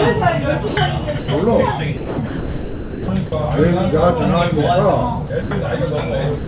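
The sender's voice detector likely mistook parts of the sound for background and stopped transmitting, so the receiver filled each gap with comfort noise. This sound dropped by the voice detector occurs at 0.68–0.77, 1.19–1.28, 1.97–2.18, 2.27–3.08, 3.26–3.32, 5.27–5.30, 5.42–5.51 and from 6.38 s to the end. Each time the sound gives way to steady, featureless noise, the longest stretch lasting 810 ms, then comes back when the detector triggers again. Throughout, nothing reaches above 4 kHz, as a narrowband call link would produce.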